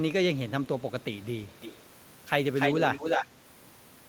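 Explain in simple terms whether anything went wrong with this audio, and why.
Two echo leaks stand out, at 1.52–1.85 s and 2.56–3.27 s. A faint copy, then one as loud as speech, trails 0.29 s behind, likely from a speakerphone's echo canceller letting sound slip back.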